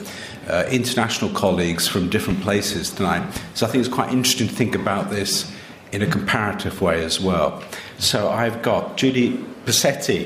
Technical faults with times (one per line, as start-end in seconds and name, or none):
2.30-2.41 loud pop
3.36-3.39 loud pop